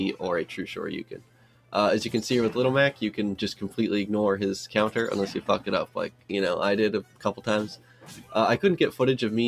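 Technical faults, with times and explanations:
Throughout: noise suppressor applied to music or sounds. A suppressor tuned for speech stays active across the clip and treats sustained or ambient content as noise. It pulls level down by around 10 dB at a time, then lets it back up. Transients pass largely intact. What follows them gets ducked. The result is an uneven, pumping level and a thinned sound, because held energy and decays are treated as something to remove.
1.04 to 1.74 s, 3.62 to 3.78 s, 5.86 to 6.30 s, 7.03 to 7.44 s, 7.76 to 8.32 s: sound cut by the noise suppressor. In these spans the suppressor clamps down harder than elsewhere. Drops reach about 12 dB at 1.04 s and 5.86 s, about 11 dB at 7.03 s and 7.76 s, and about 9 dB at 3.62 s. Sustained or fading parts sink or lose their tails. Sharper onsets still cut through, which is why these passages sound hollowed out.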